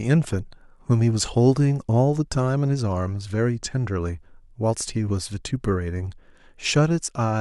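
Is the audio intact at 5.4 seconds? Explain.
Yes, the speech at 5.4 seconds is intact, with no dropout, click, distortion or other fault at that moment.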